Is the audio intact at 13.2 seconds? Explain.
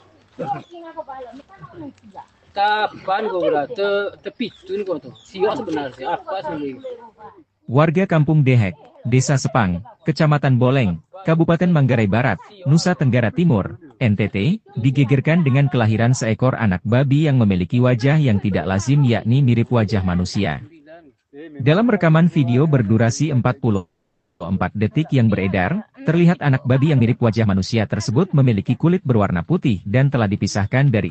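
Yes, the audio at 13.2 seconds is intact, with no fault at that moment, only the ordinary character of a call path whose codec limits the top end to around 8 kHz.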